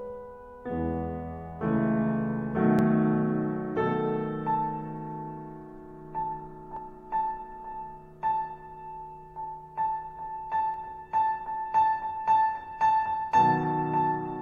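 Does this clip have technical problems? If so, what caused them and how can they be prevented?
Yes. The music gives tiny skips at 2.79, 6.77 and 10.74 s, spaced about 4 s apart, from overlap between stream segments. Overlapping time stamps made the player trim a few milliseconds of real sound, so the waveform jumps forward instead of falling silent as in a dropout. Stamping segments from exact sample counts prevents it.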